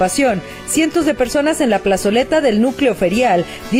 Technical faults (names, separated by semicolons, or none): clock drift between sender and receiver; repeated timing corrections